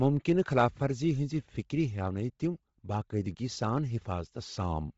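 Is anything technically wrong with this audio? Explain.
Yes. Throughout, likely Bluetooth LC3 compression, fitting 24 kbps in 7.5 ms frames, zeroes and noise-fills the upper spectrum. The speech turns heavily breathy and grainy, with nothing above 7.7 kHz.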